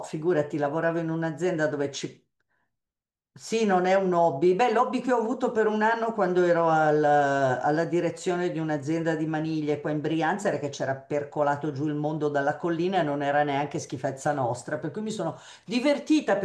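No technical faults can be heard anywhere in the recording; the signal stays steady and intact throughout.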